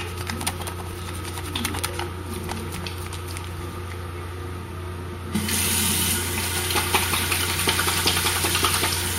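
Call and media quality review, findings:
Brief burble at 7.67 s. DAB burbling: weak-reception bit errors slipping past error correction into MP2 data, corrupting samples so single sub-bands get short noise blips.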